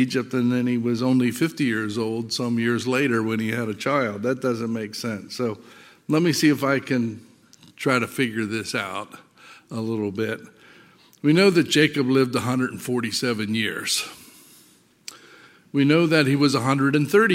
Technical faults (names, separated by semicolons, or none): none